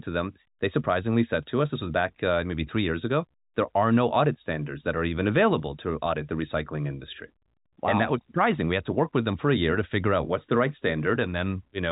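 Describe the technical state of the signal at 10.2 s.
At 10.2 s the audio is intact, with no fault present. It carries the narrow telephone band of G.711 telephone coding, with nothing above about 3.8 kHz.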